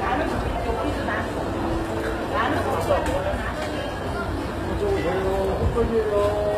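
Throughout the clip, the treble sounds gritty and metallic, which points to HE-AAC compression as the likely cause, at a low bitrate around 20 kbps. The upper bands are copied up from the lower ones, so on a spectrogram the top looks patchy and smeared, with nothing above 14.9 kHz.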